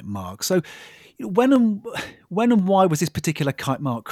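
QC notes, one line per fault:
0.53–3.62 s, clock drift buffer slips: two devices likely running on separate clocks, roughly 200 ppm apart, let the buffer between them creep until a handful of samples is dropped or repeated. This happens about four times at a steady 1.03 s interval, each heard as a click over the speech.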